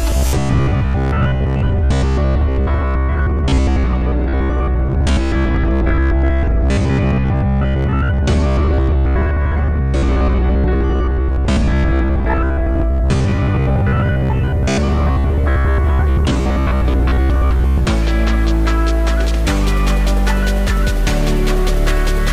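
From 0.02 s to 17.85 s the audio takes on a robotic sound from repeated short buffers, a rigid metallic buzz near 66.7 Hz. Likely, new data arrived too seldom, so roughly seven tenths of the time a 15 ms fragment repeated in place of missing audio.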